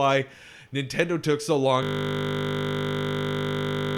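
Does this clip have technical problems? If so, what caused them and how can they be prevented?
Yes. From 1.83 s until the end, the speech gives way to a steady 50 Hz buzz: a system hang loop. The computer or driver froze while the sound hardware kept replaying the same 20 ms of audio over a hundred times, which points to a 20 ms ring buffer. To prevent it, give the audio thread real-time priority and have the driver mute output when no new buffer arrives.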